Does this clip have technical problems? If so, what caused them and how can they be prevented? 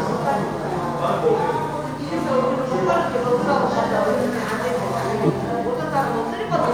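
Yes. Damaged data in the compressed stream shows up from 5.24 to 5.31 s as a brief glitch in the sound, about 70 ms long. At that point some of the encoded bytes were lost or overwritten, so the decoder could not read those frames correctly, lost its sync and skipped ahead to find the next valid frame header, leaving a short glitch. Prevention: carry the stream over a transport with checksums or error correction and verify file integrity after transfer.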